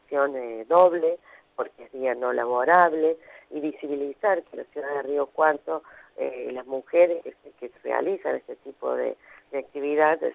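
No technical faults can be heard anywhere in the audio, and the signal stays continuous and stable throughout.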